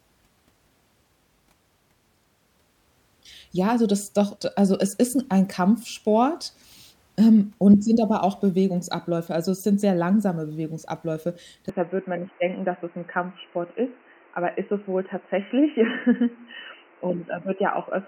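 Speech that turns abruptly dull and boxy at 11.69 s and stays so to the end, with nothing above 3 kHz, a level drop of roughly 5 dB and a new noise floor. This likely marks the input switching to a poorer device. The new background noise is what separates it from a plain bandwidth cut.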